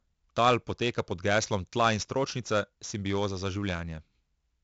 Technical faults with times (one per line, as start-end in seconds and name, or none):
0.00-4.64 4-bit ADPCM compression